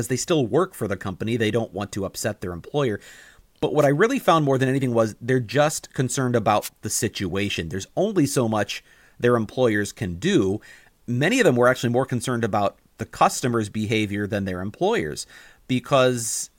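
An analogue FM wireless microphone link dropped into brief multipath fades twice in this speech, with reflected copies of the radio signal cancelling the direct path. Each time, receiver noise rose over the weakened carrier, producing a wireless microphone noise hit. The first runs from 3.79 to 3.87 s, just before "I really found more"; the second, from 6.61 to 6.69 s, sits between "was they're just concerned" and "the situation". Each is a roughly 80 ms swish of static over the voice.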